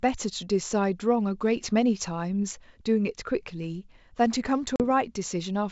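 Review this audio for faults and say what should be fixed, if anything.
Packet loss on the ADPCM call at 4.76 to 4.81 s: 40 ms of hard silence, then a rough restart while the decoder's predictor and step size catch up. Adding packet loss concealment, plus a bit more jitter buffering on the G.722 link, should smooth over gaps like that.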